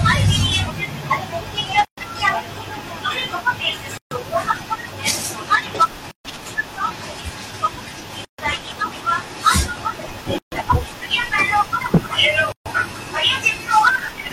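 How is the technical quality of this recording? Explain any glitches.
The speech is interrupted by short silences at regular intervals. Gaps at a join of encoded pieces occur at 1.85, 3.98, 6.11, 8.25, 10.38 and 12.52 s, each lasting about 130 to 136 ms and recurring roughly every 2 s. The audio was evidently encoded in separate chunks and joined without trimming, so each chunk's encoder start-up delay and end padding remain in the file. The speech cuts out, with softened edges, and resumes where it stopped.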